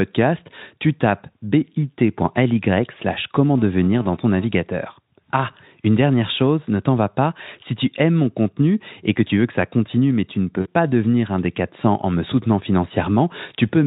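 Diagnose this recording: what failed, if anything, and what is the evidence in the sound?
The network stage dropped packets around 10.62 to 10.72 s, and the Speex decoder's packet loss concealment covered the gap. It's about 40 ms of missing audio, which fits two 20 ms frames. The decoder stretched its last pitch and filter into a fading smear, and the sound stays weak briefly afterwards as the decoder recovers.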